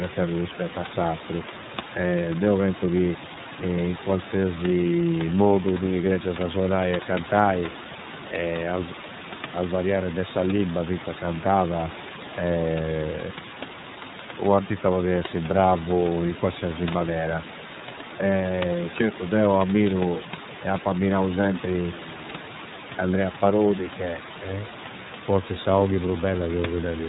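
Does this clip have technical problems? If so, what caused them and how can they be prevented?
Yes. The iLBC codec is plainly audible throughout the speech. Nothing above 4 kHz survives, and the sound is rough and slightly synthetic because each 30 ms frame's excitation is coded on its own, which fits iLBC's 13.33 kbps mode. A simple low-pass filter would only dull the sound, while this adds a grainy, buzzy texture. Switching the call path to a wideband codec such as Opus at a generous bitrate would prevent it.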